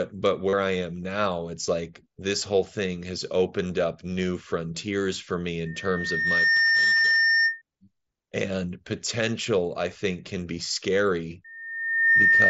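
Concealed Bluetooth headset packet loss occurs three times: voice packets from the headset never reached the phone, and the receiver filled each gap by repeating a matching stretch of the waveform it had just received. The longest gap, from 0.49 to 0.53 s (about 37.5 ms, which fits several consecutive lost frames), comes just before "I am now it's" and is a brief held, buzzy tone. Shorter 15 ms gaps at 1.66 s and at 3.68 s, between "this whole thing has" and "up new frontiers for", each lose two frames.

Loudspeaker feedback squeal occurs twice: the microphone picked up its own loudspeaker, and the loop gain climbed past one at 1.8 kHz, so that tone reinforced itself. From 5.65 to 7.62 s it swells over about a second into a steady whistle roughly 5 dB above the speech. After "think can be scary", at 11.44 s, it rises faster, in well under a second, to about 10 dB above the speech and continues to the end. 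The mSBC wideband link carries the audio with only light codec graininess.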